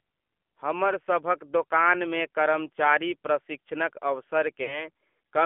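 From the start, the speech runs through the AMR narrowband mobile codec. Nothing sits below about 250 Hz or above 3.4 kHz, and the voice has a plainly buzzy, synthetic edge, which fits a low 7.4 kbps mode. A spectrogram shows a hard floor and ceiling, with smeared harmonics in between.

At 4.64 to 4.88 s there are lost AMR speech frames. The decoder stretches the last good pitch and vocal tract shape while lowering the gain, so the sound smears into a brief warble, fades, then returns rough. About 40 ms is missing, which points to two frames. The waveform shows a tapering envelope, and the spectrogram shows a frozen, fading formant pattern.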